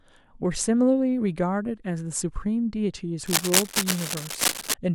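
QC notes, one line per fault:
3.26–4.74 s, cable scratch noise: dense, irregular scratching and rustling lies over the speech at roughly its own level, likely from a worn cable or connector being moved so its contact resistance jitters. Unlike isolated clicks or steady hiss, it comes in clustered, uneven bursts.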